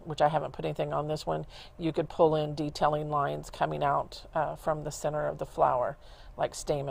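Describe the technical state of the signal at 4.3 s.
At 4.3 s the audio sits inside a run of repeated timing corrections spanning 0.24 to 6.90 s. The receiver keeps repeating short pieces, stretching playback to 96% speed and adding about a fifth of a second overall. A waveform or spectrogram shows brief duplicated segments at uneven intervals.

The cause is clock drift between sender and receiver, present throughout: the sender's clock runs roughly 4% slow, so the jitter buffer keeps draining and the receiver pads it by repeating material. On a spectrogram this appears as recurring, irregularly spaced seams where short patterns reappear.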